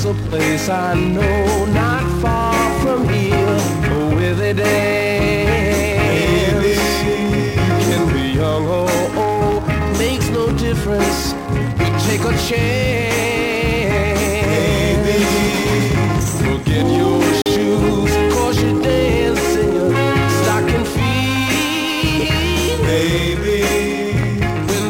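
At 17.42 s the sound drops abruptly to silence and comes back at 17.46 s, a gap of about 43 ms that reads as a brief hiccup rather than a fade. This is a Bluetooth stall, likely caused by radio interference delaying packets on their way to the headphones. With nothing arriving, the playback buffer emptied and output halted until the retransmitted packets landed. Then audio resumed, leaving a short hole.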